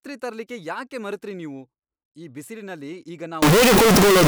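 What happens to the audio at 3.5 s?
At 3.5 s the speech is inside a float-read-as-integer fault that runs from 3.42 s to the end of the clip. The sound jumps to a very loud, harsh, nearly square waveform sitting at an almost fixed, high level, with background noise raised to the level of the speech, though the pitch contour remains traceable. The likely cause is 32-bit floating-point samples being interpreted as 32-bit integers, so sign and exponent bits dominate each value regardless of the original level.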